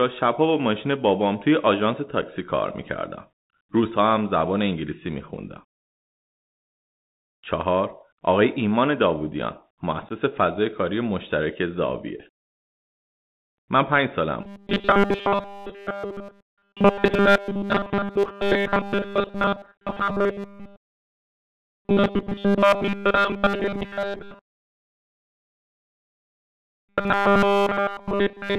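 Throughout, the Bluetooth CVSD headset codec keeps everything below 4 kHz. The spectrogram shows a hard ceiling there, sibilants sound scratchy, and a granular hiss floor runs underneath.

Unconcealed Bluetooth headset packet loss punches flat, abrupt-edged gaps into the waveform at 2.22 s (7.5 ms) and from 10.09 to 10.11 s (15 ms).

From 14.41 s onward, the sound hardens into a rigid metallic 200 Hz buzz, likely robotic sound from repeated short buffers, with a 5 ms chunk looped continuously. The spectrogram shows evenly spaced harmonic stripes.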